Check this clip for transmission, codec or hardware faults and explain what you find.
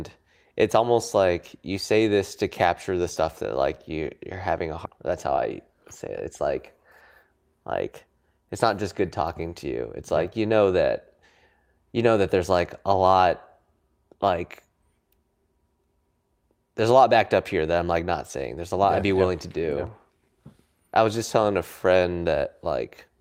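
Two transmission faults are audible in this speech.

At 4.85 s there is a skip ahead: about a second of audio is dropped while later audio was already queued, and playback jumps straight on with no silence or fill. Unlike a dropout, nothing is muted or smoothed over. The sentence simply lurches forward mid-flow.

From 4.98 to 6.43 s a jitter buffer speed-up follows. With too much audio waiting, the receiver cut short pitch-period pieces repeatedly, shedding roughly a tenth of a second. Speech runs about 7% fast but keeps its pitch, so it sounds hurried rather than chipmunk-like, which separates it from a sample-rate mismatch.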